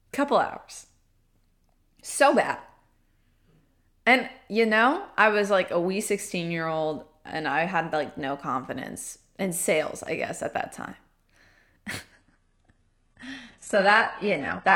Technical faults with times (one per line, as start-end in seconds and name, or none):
12.12-14.75 adaptive stream at a lower bitrate